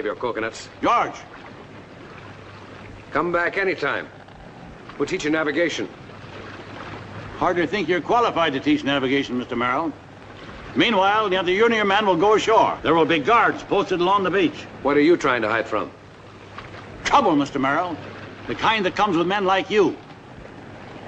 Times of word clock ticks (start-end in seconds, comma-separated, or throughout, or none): none